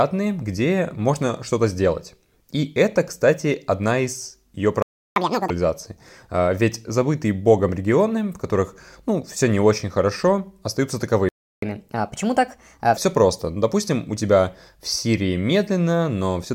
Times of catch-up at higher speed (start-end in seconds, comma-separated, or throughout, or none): 5.16-5.50, 11.62-12.97